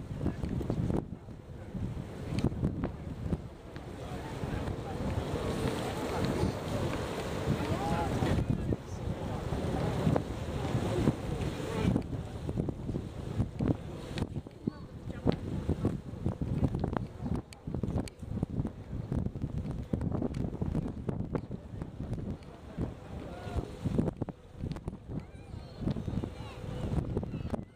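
No technical faults are audible.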